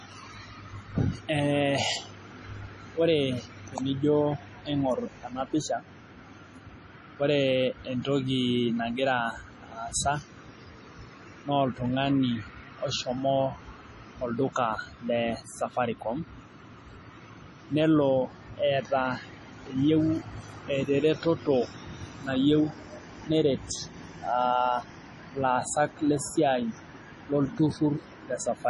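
Throughout the speech, the audio has a hard treble ceiling at 11.4 kHz and a watery, swirling texture with smeared attacks, likely MP3 compression at heavy settings that fit a bitrate near 32 kbps. A spectrogram shows a flat cutoff and flickering, patchy upper bands.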